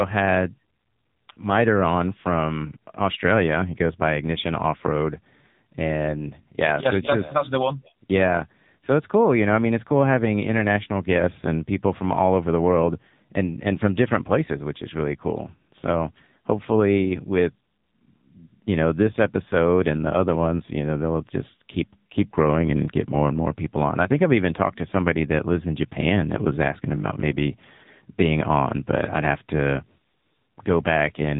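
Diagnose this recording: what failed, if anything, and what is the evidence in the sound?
The codec stage failed: the speech went through an AMR narrowband mobile codec with heavy damage. The spectrogram shows a hard ceiling at 3.8 kHz for the whole clip. The buzzy, synthetic texture suggests a low-rate mode near 6.7 kbps, where too few pulses per frame drive the vocal tract model.

From 26.97 to 27.29 s, just after "that was asking", the speech turns into a rigid 50 Hz metallic buzz. This is robotic sound from repeated short buffers, likely a driver or buffer underrun. About half the audio is a repeated 20 ms chunk. The waveform shows identical cycles, and the spectrogram shows harmonic stripes spaced every 50 Hz.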